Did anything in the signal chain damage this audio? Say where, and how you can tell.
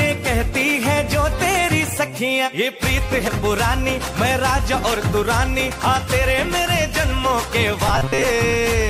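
Yes. At the codec or storage stage, the sound jumps ahead at 3.28 s and 5.71 s, which shows compressed frames skipped: roughly 100 ms, then about 70 ms, missing, which fits whole 32 ms frames. On a spectrogram, the spectrum shifts abruptly at each join.

From 7.88 to 8.24 s, a rigid metallic buzz at 133 Hz points to robotic sound from repeated short buffers, likely a driver or buffer underrun. A segment of about 7.5 ms loops while about half the real audio is skipped. The waveform shows identical repeating cycles, and the spectrogram shows evenly spaced harmonic lines at multiples of 133 Hz.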